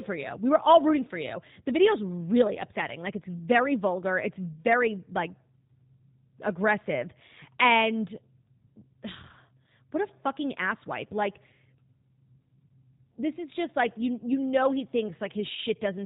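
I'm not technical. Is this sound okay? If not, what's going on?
No. The speech passed through the G.729 codec, a low-rate phone-call format that rebuilds the voice from a rough model instead of sending it as recorded. Throughout the clip that leaves it muffled above 4 kHz, slightly rough and synthetic-sounding, though still understandable.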